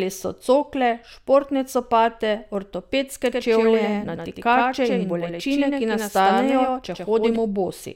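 From about 3.26 s to 7.36 s the speech is heard twice: a second, full-band copy trails the original by roughly a tenth of a second, a few decibels quieter, with no decay or room colour, and it cuts in and out abruptly at those two points. This is a doubled audio track, likely from the same signal being captured again through a slower path, or from an edit that leaves two copies out of step.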